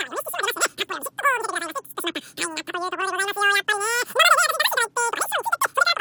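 The speech in this clip is squeaky and racing from start to finish, running about 2.76 times too fast and pitched roughly 17.6 semitones high, well over an octave, so everything has a chipmunk-like quality. This is a wrong sample rate fault. The samples were played back far faster than they were captured, with no resampling, so speed and pitch rose together. The ratio fits audio recorded at 16 kHz being played at 44.1 kHz.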